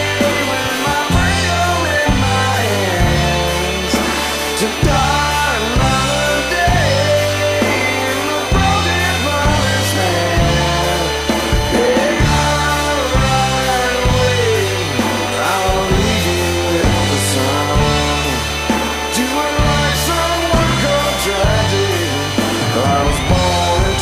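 Switching supply whistle runs from start to end: a switching power supply is running in an audible burst mode or beating with another one, leaving a high tone around 3 kHz that wanders between about 3.0 and 3.1 kHz, sitting roughly 20 dB below the sound.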